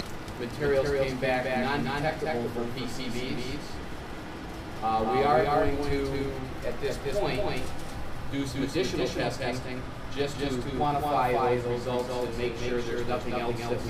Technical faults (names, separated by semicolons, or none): doubled audio track